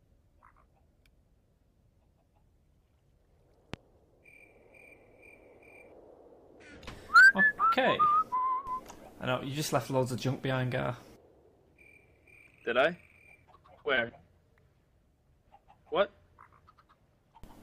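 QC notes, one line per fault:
3.74–3.78 s, loud pop: a single sharp thump lasting about 40 ms, peaking roughly 10 dB above the surrounding audio. The sound carries on underneath without a gap, which separates it from a dropout. The cause is likely a voltage pulse from a plug, switch or static discharge.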